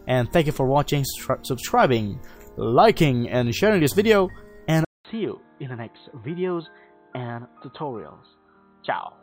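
At 4.85 s the audio drops out for 200 ms, then resumes duller and slightly quieter, with nothing above 4.1 kHz and a faint new noise floor, through to the end. This is likely an input switched to a poorer, narrower-band device mid-recording.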